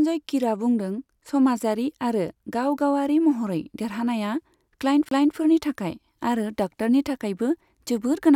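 At 5.09 to 5.11 s the speech drops out with a brief tick and a mute of about 30 ms, then resumes from a different point. This is a CD skip: the laser jumped to another turn of the disc's spiral, so playback restarts elsewhere.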